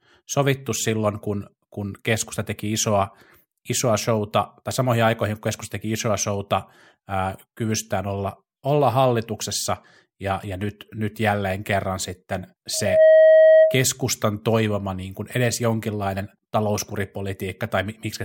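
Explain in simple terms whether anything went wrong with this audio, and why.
Loudspeaker feedback squeal, from 12.73 to 13.87 s, just after "nyt jälleen kerran sitten". The microphone picked up its own loudspeaker, so one pitch, about 634 Hz, looped round and grew, swelling within about a third of a second into a loud whistle over the speech.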